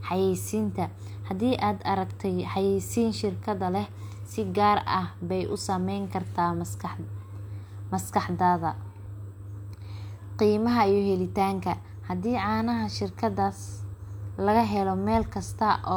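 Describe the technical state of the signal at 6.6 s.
At 6.6 s the speech signal is intact, with no fault present at that moment.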